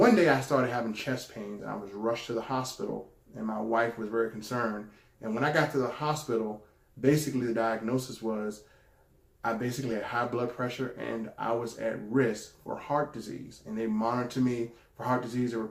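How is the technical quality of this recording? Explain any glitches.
The recording has two brief glitches, both from compressed frames skipped. At 1.59 to 1.63 s and again at 9.91 s, the decoder jumps forward by about two 20 ms frames, so roughly 40 ms of audio never plays. Those frames were either missing from the file or rejected as damaged. Each join is a small jump in the sound.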